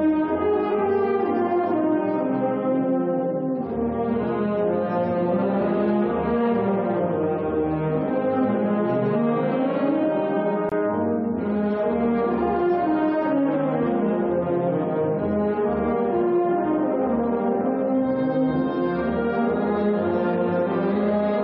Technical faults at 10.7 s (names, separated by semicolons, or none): gap between stream segments